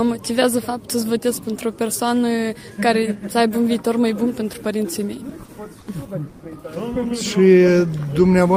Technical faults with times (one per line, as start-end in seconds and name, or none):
5.29-5.50 short stall from a late packet
5.80-5.89 short stall from a late packet
6.29-6.41 call audio freeze